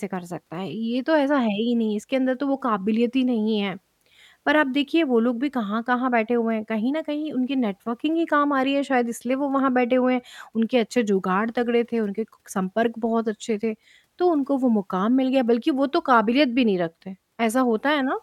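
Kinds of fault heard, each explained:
No technical faults detected.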